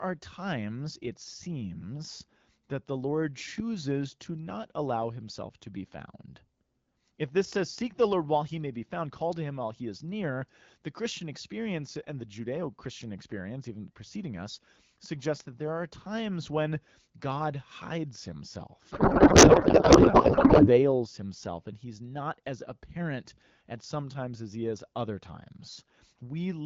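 From 18.91 to 20.91 s, before "himself and he's not", a codec payload misread turns speech into garbled warble, pointing to octet-aligned AMR unpacked as bandwidth-efficient.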